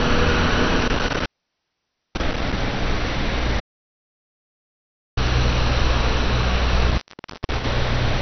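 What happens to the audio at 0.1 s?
MP2 compression is present at 0.1 s, as it is from start to end. Nothing reaches above about 6.2 kHz, so the sound is dull, with a gurgling, granular grit on what remains. This likely comes from MPEG Layer II coding at a starved rate, one consistent with about 48 kbps. The encoder splits the spectrum into 32 sub-bands and shuts off the upper ones when bits run out, while the surviving bands are coarsely quantised and flicker in and out.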